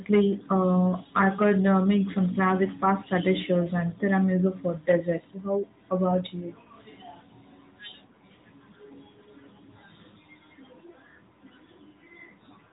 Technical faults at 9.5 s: AMR narrowband mobile codec

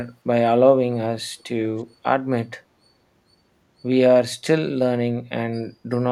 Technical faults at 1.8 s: echo leak

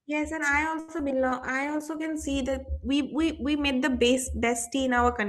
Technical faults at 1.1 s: short concealed packet loss

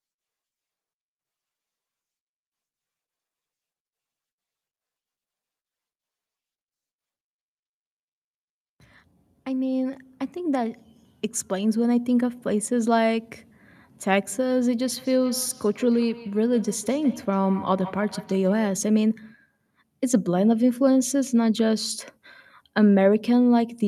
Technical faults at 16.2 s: feedback echo between two devices

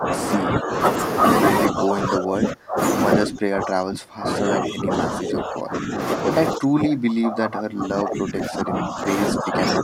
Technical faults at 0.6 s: speech suppressed in double talk

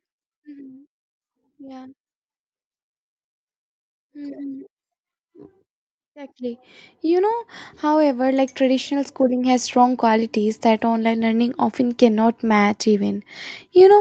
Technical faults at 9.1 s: automatic gain rising

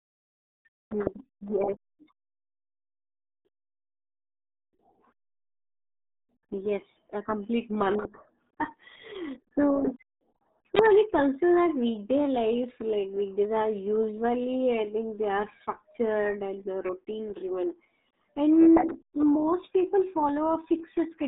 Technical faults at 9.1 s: RealAudio 14.4 codec

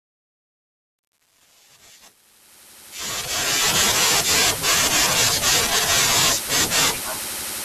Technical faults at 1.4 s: truncation distortion on a fade

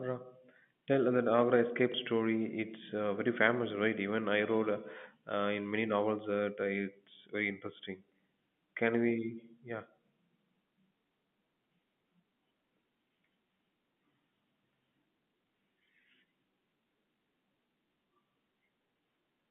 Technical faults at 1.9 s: packet loss with last packet repeated

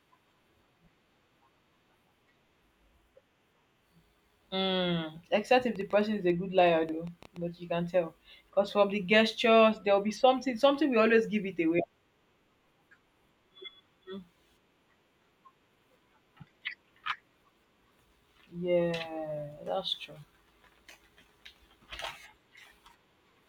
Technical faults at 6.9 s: train of clicks

